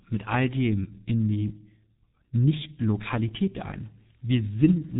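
Muffled, hoarse speech with smeared consonants and nothing above 3.8 kHz runs throughout, the mark of heavy G.723.1 codec coding, which fits about 6.3 kbit/s.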